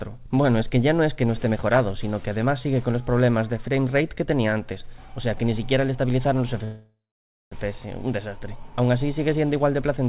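At 5.38 s a repeated buffer produces a brief click-buzz. A piece of about 5 ms, which fits a 256-sample buffer, plays twice more with hard joins, and about 10 ms of audio is skipped. That skip separates it from a freeze, which delays the audio without losing any.

From 6.64 to 7.54 s comes a call audio freeze. The last sound carries on as a fading buzz, then about 560 ms of silence, and the audio resumes where it stopped, 874 ms late and with nothing missing. Packets were likely held up and the jitter buffer ran empty. The 4 kHz ceiling of the G.711 path is audible throughout.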